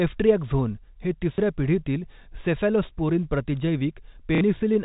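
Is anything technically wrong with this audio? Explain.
Yes. The speech has two brief packet loss events where the last packet was repeated: one at 1.35 to 1.38 s lasting 30 ms, and another at 4.35 to 4.41 s lasting 60 ms, which fits two consecutive 30 ms packets. The receiver filled each gap by replaying the previous chunk of audio. That replay seldom aligns with the pitch period, and the longer gap repeats at roughly 33 Hz, producing a short robotic stutter. The G.711 telephone coding carrying the audio caps the bandwidth at 4 kHz.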